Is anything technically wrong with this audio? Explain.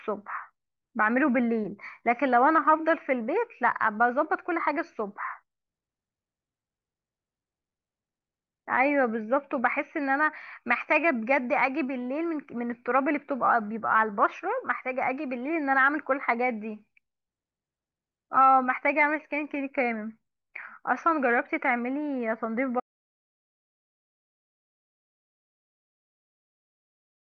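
Yes. There is an audio dropout to silence from 22.80 s to the end of the speech, about 4.5 s in all. The speech stops abruptly, mid-flow, and does not return. The gap is silent, with no room tone or background hiss left. The input was likely lost, through a disconnected device, a failed link or a mute, while the recorder kept writing silence. Whatever was said during those final seconds is gone.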